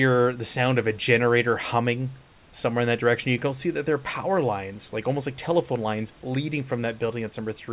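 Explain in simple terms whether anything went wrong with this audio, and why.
Nothing went wrong here.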